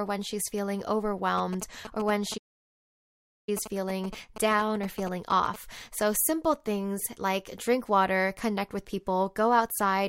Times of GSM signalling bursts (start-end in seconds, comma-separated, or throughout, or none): 1.38-5.56